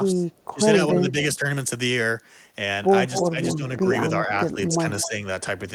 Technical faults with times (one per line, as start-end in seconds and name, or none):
0.12-0.59 speech suppressed in double talk
0.32-0.45 echo leak
0.92-1.46 speech suppressed in double talk
3.11-3.56 echo leak
3.21-3.86 speech suppressed in double talk
4.19-5.20 speech suppressed in double talk
5.01-5.08 echo leak